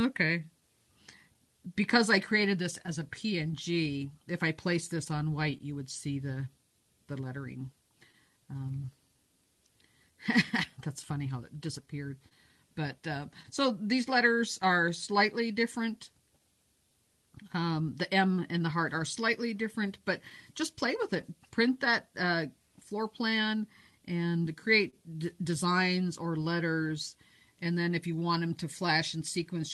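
From start to finish the timing feels faintly unsteady, with small hiccups recurring at uneven intervals rather than on any regular beat. This is clock drift between sender and receiver: the sender's clock runs roughly 2 percent slow, so the receiver's jitter buffer keeps draining and the playback side has to stretch material, and occasionally wait, to avoid running dry. The sound passes through an Opus call codec whose top end stops near 12 kHz, consistent with a setting around 32 kbps.

Between 0.27 s and 21.2 s there are about fifteen tiny blemishes, brief ticks or slight smears scattered one here, one there, none longer than roughly 20 ms. These are scattered short gaps: individual packets arrived too late or not at all, and the receiver covered each hole by extending the last sound it had. Altogether only around 150 ms is patched, about one percent of the stretch, and nothing is actually lost.

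Overlapping that, from 0.61 s to 29.54 s, the pace sags very slightly, running at about 99 percent speed, with small drawn-out moments spaced unevenly. These are repeated timing corrections, the receiver's ongoing response to the slow sender clock. Each edit lengthens a short piece of audio, always in the same direction, and together they add roughly 400 ms. Individually they are barely audible and come across as a mildly uneven tempo.

At 24.90 to 24.95 s one sound hangs on a touch too long, with a faint buzzy dip before things resume. This is a short stall from a late packet: the jitter buffer ran empty, so the receiver stretched the previous sound for 24 ms until the packet turned up, then continued from the same place. Nothing is skipped, but playback is left 24 ms further behind.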